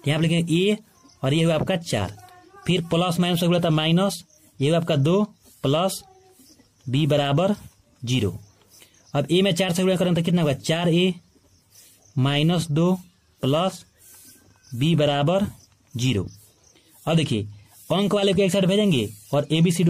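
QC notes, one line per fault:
No faults detected anywhere in the audio; nothing to log.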